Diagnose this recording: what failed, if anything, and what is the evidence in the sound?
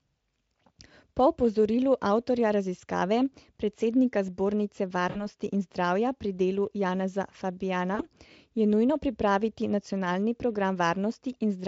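Network stage: VoIP packet loss concealed by the speech codec. At 5.09 to 5.28 s, before "in zdravja pri delu", and 7.95 to 8.06 s, before "je nujno pripraviti nacionalni", speech smears into a fading buzz. About 60 and 40 ms went missing. The decoder extrapolated its last pitch and filter.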